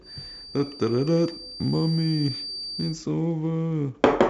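From 0 to 3.01 s, a thin feedback whistle near 4.7 kHz sits well below the speech. A speaker-to-microphone loop likely hovered at the edge of feedback.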